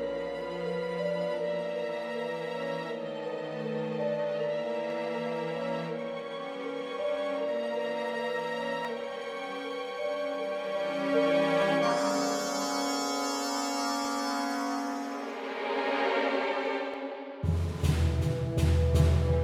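Seven sharp, isolated clicks cut through the sound, at 0.41, 4.90, 8.85, 11.62, 14.05, 16.94 and 18.76 s. Each is a single tick with nothing missing around it. In a spectrogram each would show as a thin vertical line. The likely cause is dropped samples. A tiny slice of the stream, a fraction of a millisecond, goes missing. The waveform then jumps straight to a later value, and that step is the click.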